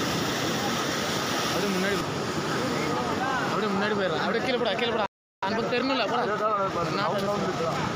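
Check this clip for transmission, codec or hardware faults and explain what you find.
Two faults are audible, both around the same moment.

From 5.06 to 5.43 s the sound simply cuts out mid-flow, leaving a hole of about 0.36 s before it resumes. This is a playback stall. The player likely ran short of buffered data or had its output thread held up, so nothing reached the output until it recovered. The gap is long enough to register clearly as a break rather than a click.

Straight after, from 5.43 to 7.81 s, the audio runs hurried, at 1.15 times normal speed, yet its pitch stays put. This is time-compressed catch-up. Having fallen behind during the stall, the player works off the backlog by removing short slices of audio and cross-fading the joins, which shortens the sound without transposing it.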